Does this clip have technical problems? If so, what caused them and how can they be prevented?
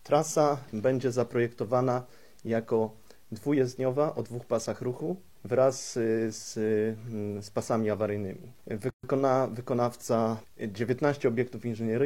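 Yes. The pieces were encoded separately and joined without trimming each encoder's start-up delay and final-frame padding. The result is a gap at a join of encoded pieces: from 8.90 to 9.03 s the sound drops out for 132 ms, with smeared edges, then resumes where it left off. Trimming the encoder delay and padding from each piece before joining, or encoding the whole clip in a single run, would prevent it.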